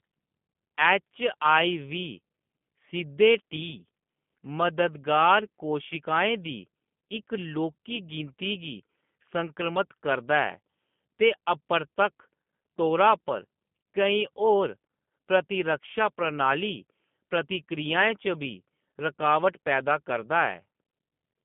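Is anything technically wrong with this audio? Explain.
Yes. The speech has G.729 codec damage from start to finish, and it is plainly audible. The sound is rebuilt from a vocal tract filter, a pitch predictor and a few pulses in each 10 ms frame, which fits an 8 kbit/s telephone stream. It comes out rough and faintly synthetic, and the band runs from about 150 Hz to 3.5 kHz. On a spectrogram, energy stops at a hard ceiling near 3.6 kHz, with an empty region above it.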